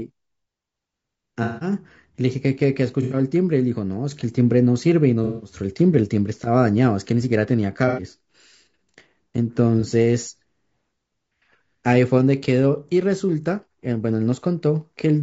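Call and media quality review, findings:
Codec, whole clip: likely low-delay AAC compression (AAC-ELD). Short analysis frames resolve the speech harmonics poorly at this bit budget, and the damage is plainly audible.

Symptom: rough, grainy speech with noise filling between harmonics and a thin, synthetic-sounding top band. The degree fits a rate around 32 kbps.

AAC frame loss with concealment. Decoder lost frames and patched each gap from the last good spectrum. Heard as smeared, noisy, phasey patches at 1.43–1.72 s and 5.24–5.54 s (about 180 ms each), 3.02–3.16 s and 7.88–8.02 s (about 90 ms each), and 9.80–9.85 s (a brief 30 ms blur).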